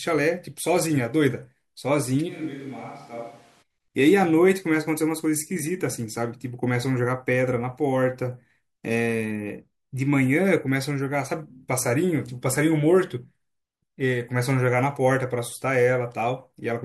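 A switch to a distant microphone at 2.30 to 3.61 s: speech abruptly turns hollow, thin and roomy, about 10 dB quieter, likely because the close microphone dropped out.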